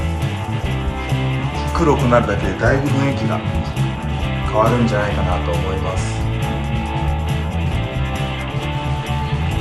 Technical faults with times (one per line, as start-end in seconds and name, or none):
0.00-9.60 MP2 compression